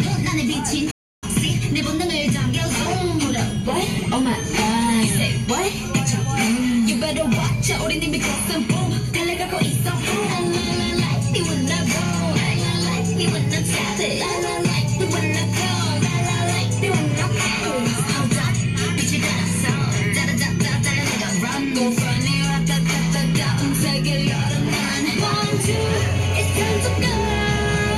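At 0.90 s the sound stops dead in mid-flow and stays silent until 1.24 s, a gap of about 313 ms, before carrying on. This playback stall most likely comes from the player running short of data or its output thread being held up, so nothing reached the output until it caught up. On a waveform it appears as a flat line cutting abruptly into the signal. A spectrogram shows a blank vertical band across all frequencies.

At 15.43 s there is a bit error spike: a single sample jumps sharply away from its neighbours and returns at once, as a flipped bit would cause by shifting the value by a power of two. It is heard as one crisp tick with no relation to the surrounding sound. On the waveform it is a lone vertical needle standing out from the trace. On a spectrogram it is a thin vertical line running through the full frequency range.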